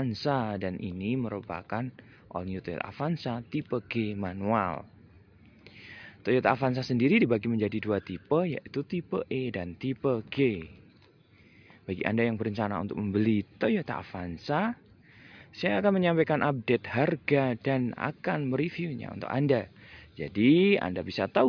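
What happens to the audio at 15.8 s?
Nothing goes wrong at 15.8 s; the audio plays through that moment intact, with no dropout, click or distortion.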